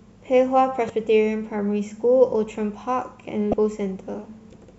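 At 0.87 to 0.90 s and again at 3.50 to 3.54 s, the speech is broken by a brief glitch lasting roughly a thirtieth of a second each time. Both are damaged data in a compressed stream: part of the encoded audio was corrupted, so the decoder misread the affected frame and lost its place in the bitstream before locking back onto a valid frame header.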